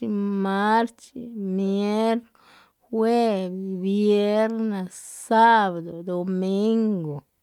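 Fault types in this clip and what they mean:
No technical faults can be heard anywhere in the recording; the signal holds steady and continuous throughout.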